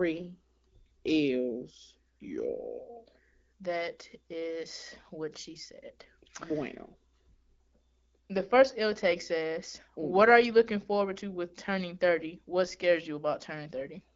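No technical faults are present in this speech, which is carried by the AMR wideband (HD Voice) codec at 12.65 kbit/s, a rate at which that codec is working as intended.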